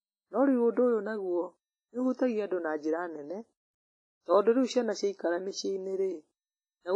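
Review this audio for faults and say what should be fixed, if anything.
Throughout, the speech sounds washy and ringing, with hiss that swells with the signal and nothing above 10.6 kHz, likely from heavy WMA compression at a low bitrate. Keep a higher-bitrate or lossless source and re-export with a modern codec instead of this low-rate WMA encoding.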